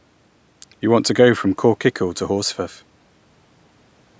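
No technical faults occur at any point in the speech, which has simply passed through a call's microphone processing.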